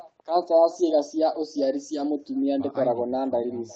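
Throughout the speech, echo with no canceller shadows every phrase with a thin copy arriving roughly 400 ms later at about 21 dB below the original. The far end's loudspeaker is feeding its microphone and nothing strips it out. That delayed copy is a distinct repeat, not the smeared tail of room reverberation.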